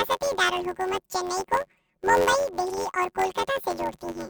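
This is speech with a robotic buzz running through the whole clip. The fault is planar audio read as interleaved. Each block of about 11 ms stores one channel and then the other. Read as alternating pairs, each block plays twice at double speed. At these short blocks, the result is a buzz near 92 Hz with no clear octave shift.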